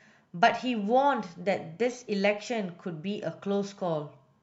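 Nothing in the speech signal departs from normal technical behaviour at any point, with no audible disturbance, dropout or distortion anywhere in the recording.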